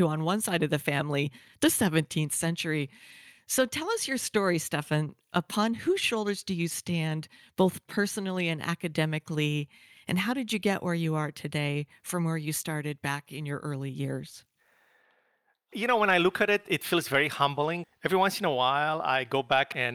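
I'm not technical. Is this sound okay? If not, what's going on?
Yes, nothing in this speech recording points to a technical fault, so there's nothing to fix.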